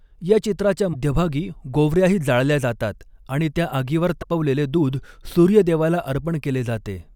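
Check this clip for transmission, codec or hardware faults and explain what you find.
Two brief glitches interrupt the speech. At 0.93 to 0.95 s, right after "या चित्राच्या", and at 4.21 to 4.24 s, after "जातात आणि त्या आगीवर", the audio jumps ahead. This is likely a broken MP3 bit reservoir. When frames go missing, the next frame reaches back for borrowed data and decodes another frame's bytes instead. The roughly 28 ms span fits about one 24 ms MP3 frame.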